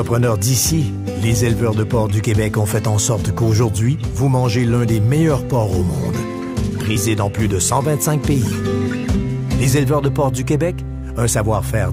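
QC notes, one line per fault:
6.96 s, compressed frames skipped: the audio jumps ahead by around 30 ms, which fits about one dropped 32 ms frame the decoder never played.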